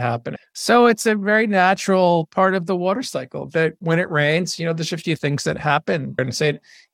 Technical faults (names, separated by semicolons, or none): none